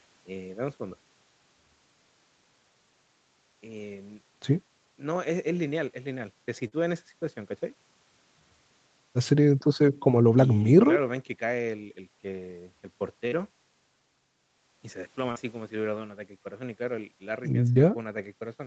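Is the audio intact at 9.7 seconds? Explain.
Yes, at 9.7 seconds the speech is intact, with nothing there beyond the normal band limit of the call path, which leaves nothing above about 8 kHz.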